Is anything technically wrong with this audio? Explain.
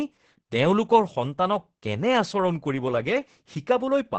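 Yes. Opus voice compression runs throughout the speech. Starved SILK linear-prediction coding, consistent with a bitrate around 10 kbps, quantises the excitation heavily, leaving the voice muffled, hoarse and slightly robotic. A spectrogram shows a hard ceiling near 8.6 kHz with smeared, blocky harmonics below it.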